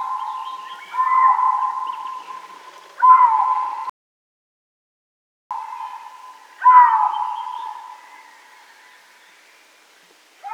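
At 3.90 s the sound cuts out abruptly in mid-flow. This is an audio dropout to silence. The gap lasts about 1.61 s, until the sound returns at 5.51 s. The silence is total, with no room tone or hiss underneath. That points to lost input rather than quiet material. The input was likely lost for that span while recording carried on. Whatever happened during those 1.61 s is missing.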